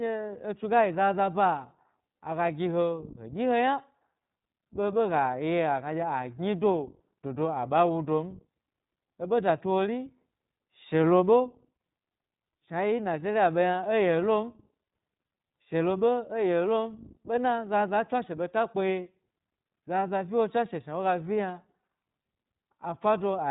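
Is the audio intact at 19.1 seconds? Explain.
No. At 19.1 s you're hearing the iLBC codec, and it's on the whole clip, not just that moment. The speech is coded as narrowband with nothing above 3.8 kHz, so it sounds boxed-in and phone-like. Each short frame's excitation is coded on its own, which fits 20 ms frames and likely a 15.2 kbps mode. That gives the voice a plainly audible rough, slightly synthetic grain throughout.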